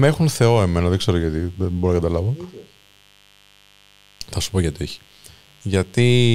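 A raspy mains buzz runs under the speech the whole way, with 50 Hz switching spikes spraying harmonics up into the kilohertz range, sitting roughly 35 dB down.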